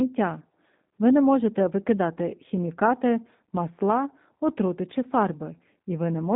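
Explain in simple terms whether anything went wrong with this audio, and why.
Yes. The whole clip has been through the G.729 codec, a phone-call format. It rebuilds the speech from a simple model of the voice instead of storing the actual sound. That makes it rough and a bit robotic. Everything above 3.7 kHz is gone, so it sounds muffled.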